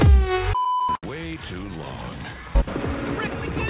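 A late packet emptied the jitter buffer at 0.96 s, a short stall from a late packet. The last sound is held about 68 ms until 1.04 s, then resumes with nothing lost.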